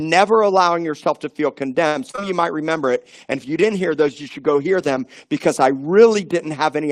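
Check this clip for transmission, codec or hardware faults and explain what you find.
Three transmission faults affect this speech clip: a late-packet stall, two overlapping concealed packet losses, and a sustained call bitrate drop.

From 1.87 to 1.97 s a sound is held unnaturally long. This is a short stall from a late packet. The jitter buffer emptied and the receiver stretched the last sound for 79 ms until the packet arrived.

Between 2.11 and 2.29 s, with a nested gap at 2.16–2.19 s, there is a brief smear and wobble. This is short concealed packet loss: about 40 ms and 20 ms of audio never arrived, and the receiver patched the gaps by extending the preceding sound.

From 2.66 to 6.34 s the audio turns rougher and duller. This is a call bitrate drop from 32 to 16 kbps, holding at the lowest rate for about 2.4 s, so the encoder codes more coarsely and loses high-frequency detail.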